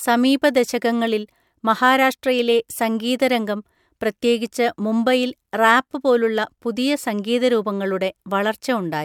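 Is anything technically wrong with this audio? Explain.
No, nothing technically wrong.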